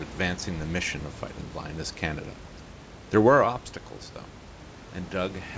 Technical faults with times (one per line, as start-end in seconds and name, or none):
none